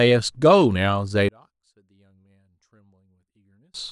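From 1.29 s to 3.74 s, one stereo channel has likely been flipped in polarity, so when the two channels are summed to mono the shared content cancels instead of adding. This one channel inverted fault drops the level by about 34 dB. The centred speech almost disappears, leaving only a faint residue of whatever differed between the channels. The speech then comes back at full strength just before the clip ends.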